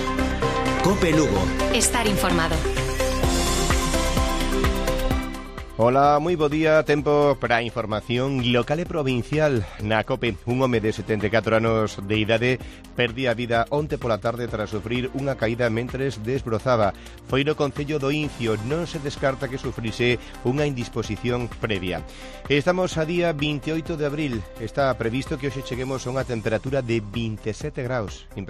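No technical faults can be heard anywhere in the audio, and the signal stays steady and intact throughout.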